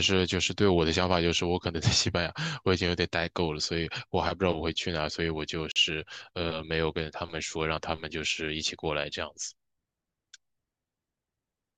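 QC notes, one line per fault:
5.72–5.76 s: gap at a join of encoded pieces. A 43 ms silence cuts into continuous speech, edges smeared, then the sound resumes where it stopped. Two separately encoded segments were joined untrimmed, leaving encoder start delay and last-frame padding in place.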